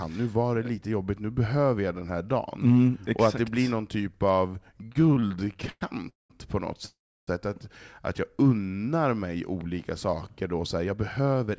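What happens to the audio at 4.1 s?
Nothing goes wrong at 4.1 s; the speech there carries on intact, with the call path's wideband coding leaving the expected lack of content above 8 kHz and no dropout, glitch or other fault at that point.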